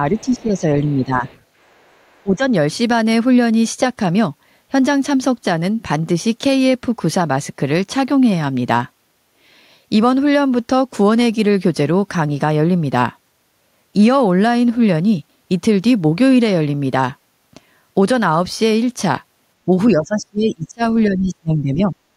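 From 0.11 to 0.64 s, 0.83 to 1.24 s and 2.23 to 2.43 s, speech is suppressed in double talk. The talker dips by around 10 to 20 dB. The echo canceller likely ducked both sides at once. The other side's voice leaks through faintly, far below the speech, at 0.16 to 0.42 s, 1.28 to 1.42 s and 1.71 to 2.23 s. The canceller likely left residual echo. From 19.92 to 20.82 s and 21.05 to 21.95 s, the suppression returns deeper, nearly muting the talker.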